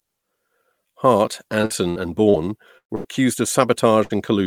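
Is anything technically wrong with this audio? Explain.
Yes. This speech clip has two kinds of network fault.

From 1.61 to 2.36 s there is repeated packet loss, with a robotic sound. Four gaps fall close together, the longest 58 ms. Each is patched by extending the previous sound, so about 160 ms is missing. The stretch sounds choppy.

Three bursts of packet loss follow, at 2.78–2.91 s, 2.95–3.06 s and 4.04–4.12 s. In each, a run of audio failed to arrive, 120, 100 and 60 ms respectively. The receiver held the last sound and faded it. The first burst decays into about 90 ms of silence. The sound then jumps ahead, with that portion lost.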